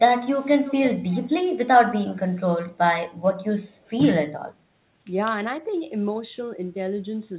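Echo leak at 0.38–0.45 s, 0.63–1.29 s and 3.85–3.90 s: speech returns 326 ms late, likely from a loudspeaker whose echo canceller let some through. The long middle stretch is about 20 dB down; the two brief scraps are about 40 dB down.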